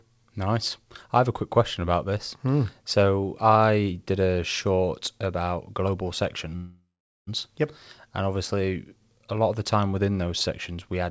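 Right after "a short about global", from 6.56 to 7.29 s, there's a call audio freeze. The last sound is stretched out, fades, then goes silent for 0.43 s, likely because packets stalled and the jitter buffer ran dry. The speech picks up where it stopped, so nothing is lost, but everything after lands 0.71 s late. The G.722 call path leaves nothing above 8 kHz.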